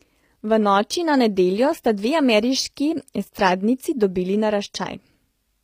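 HE-AAC compression runs through the whole speech clip. The upper treble sounds rebuilt rather than captured: sibilants come out gritty and lispy, with a metallic sheen, and nothing is present above about 15.5 kHz. This is likely spectral band replication, where lower bands are copied upward and shaped with only a rough envelope, so the rebuilt harmonics don't line up with the real ones. The plainly audible damage fits a low bitrate of around 24 kbps.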